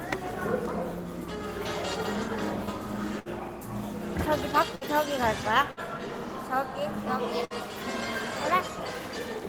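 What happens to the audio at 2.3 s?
Nothing goes wrong at 2.3 s; the sound carries on intact through that moment.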